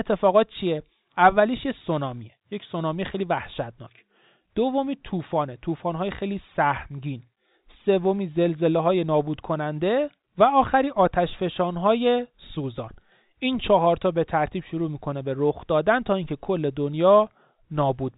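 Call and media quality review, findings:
No faults found: the speech sits in the normal G.711 mu-law telephone band, with nothing above 3.8 kHz and at most a faint quantisation noise that tracks the signal level, as that coding produces.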